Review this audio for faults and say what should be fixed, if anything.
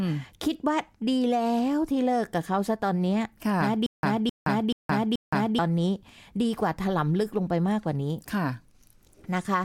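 From 3.86 s to 5.59 s there's a stutter with silent gaps: a 261 ms chunk of the speech plays, drops into about 170 ms of dead digital silence, then the same chunk comes back, four times over on a steady 431 ms cycle. The likely cause is a stalled player or stream replaying its last buffered fragment on each retry and running dry, so the audio that belonged there is gone. Give the playback path enough buffering and a proper underrun recovery so it waits instead of looping stale data.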